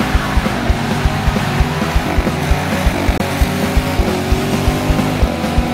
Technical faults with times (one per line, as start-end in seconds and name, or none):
3.18-3.21 Bluetooth dropout